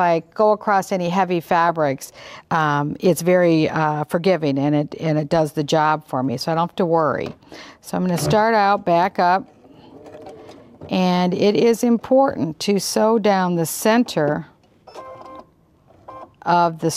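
Nothing here jumps out as a technical fault, so there's no problem to walk through in this one.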